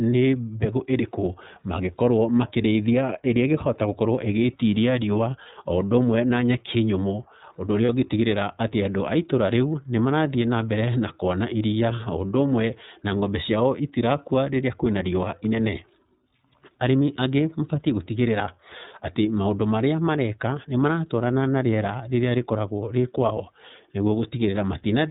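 iLBC codec, throughout: the speech has been squeezed through a narrowband VoIP coder, so nothing above 4 kHz survives. The damage is plainly audible, with the voice sounding a little rough and synthetic. The damage fits iLBC running at 13.33 kbps with self-contained 30 ms frames.

Lost iLBC frames, at 7.85 to 7.90 s: a brief dropout of about 30 ms, which fits a single lost frame, is filled by the decoder repeating the last pitch cycle mixed with noise. It sounds like a short buzzy held vowel, with the voice back to normal immediately afterwards.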